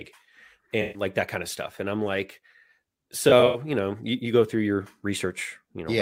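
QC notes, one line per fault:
0.81–1.02 s, AAC frame loss with concealment: about 128 ms drops out just before "that kind of stuff", and the decoder smears the last good spectrum over the gap, so it turns phasey and noisy.
3.29–3.60 s, AAC frame loss with concealment: the same total loss, but scattered over 256 ms with the longest gap around a tenth of a second, so you get choppy smeared patches right before "you know you you".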